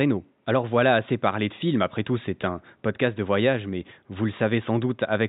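The speech signal shows no technical faults, with only a faint bed of room noise sitting about 53 dB below the voice as part of the recording itself.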